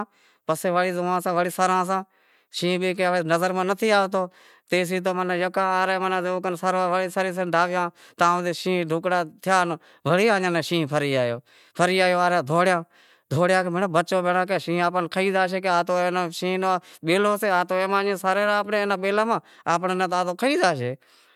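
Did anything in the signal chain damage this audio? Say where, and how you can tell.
No, nothing in the chain has audibly damaged this speech recording at any stage.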